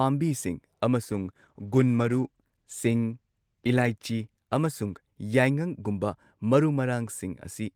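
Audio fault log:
1.06–6.85 s, call bitrate drop: speech turns coarse, watery and muffled, fitting a fall from 64 to 16 kbps, with no gaps as in packet loss.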